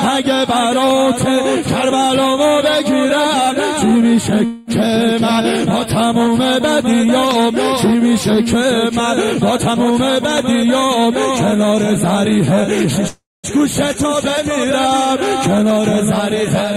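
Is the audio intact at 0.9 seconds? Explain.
No. A loud pop sits from 0.91 to 0.93 s: a single sharp pulse that peaks roughly 10 dB above the surrounding sound, which carries on beneath it without a break. The likely cause is a sudden voltage step or spike, such as from a plug, switch, static discharge or driver glitch, entering the signal chain. The downstream circuitry then shapes that spike into this brief, hard thump.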